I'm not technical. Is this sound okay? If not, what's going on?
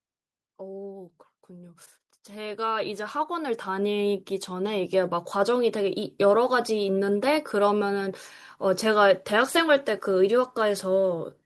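No. From about 1.47 to 6.8 seconds, the automatic gain control, which sets the recording level, decided the input was too quiet and kept raising it, an automatic gain rise. The speech and the background noise behind it grow steadily louder together.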